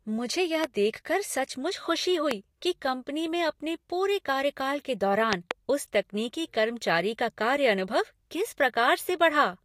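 Speech clip with loud pops at 0.64 s and 2.31 to 2.33 s, each roughly 15 dB above the speech, then a double pop from 5.33 to 5.53 s, roughly 25 dB above. Each is likely a voltage pulse from a plug, switch, static or driver glitch. On the waveform they show as tall spikes over the ongoing speech, and on the spectrogram as thin vertical broadband lines.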